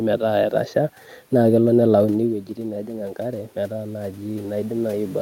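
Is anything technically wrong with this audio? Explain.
Yes, there is one fault: automatic gain rising. From 3.71 s, just after "nelauni wuejitin najing enkare", to the end of the clip, the input level drops by about 9 dB. The automatic gain control responds by raising its gain gradually rather than instantly, so the speech and the room noise behind it swell upward together over the final second and a half. The talker's movement around 2 s is a natural level change at the microphone, not a system fault.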